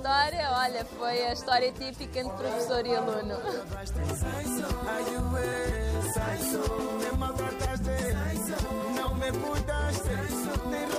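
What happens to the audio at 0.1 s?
Nothing goes wrong at 0.1 s; the audio plays through that moment intact, with no dropout, click or distortion.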